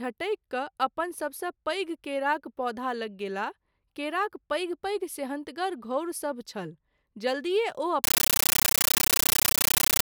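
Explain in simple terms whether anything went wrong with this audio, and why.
From 8.04 s to the end, the speech gives way to loud, harsh, chattering static. This is a compressed stream played as audio. Coded data, likely Dolby Digital, was played as sound without being decoded. Each data frame becomes a 13.3 ms noise burst, about 31 times a second.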